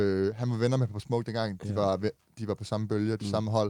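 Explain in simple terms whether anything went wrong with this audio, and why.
Nothing went wrong here; the speech comes through the whole way without any glitch, dropout or odd sound to point to.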